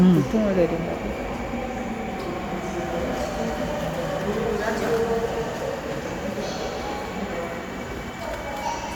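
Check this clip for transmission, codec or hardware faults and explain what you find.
Nothing in this clip points to a fault.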